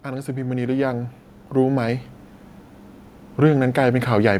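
Right from the start, at 0.05 s, there's automatic gain rising that carries on until about 2.12 s. The gain control decided the input was too quiet and kept nudging its level up over roughly two seconds, adding about 9 dB in total. You hear the voice and the background room sound swell together, so it's not the talker getting louder. The whole picture slowly creeps forward until it settles.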